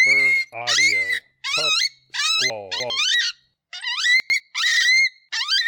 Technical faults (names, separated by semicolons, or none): chunks out of order